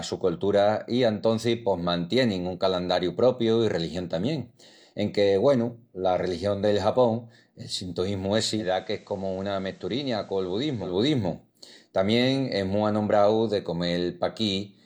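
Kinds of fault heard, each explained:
Digital radio blending to analogue: after "el sintoísmu", around 8.53 s, the receiver loses the digital stream and fades over about 179 ms to the FM copy. Level drops about 5 dB, and faint hiss sits well below the speech until 10.98 s.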